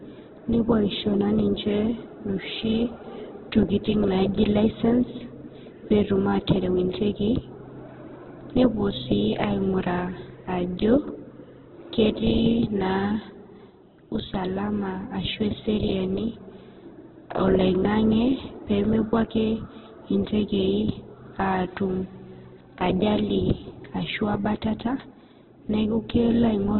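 Throughout, the speech sounds rough, grainy and muffled, with nothing above 4.1 kHz, likely from heavy Opus compression at a very low bitrate, around 8 kbps.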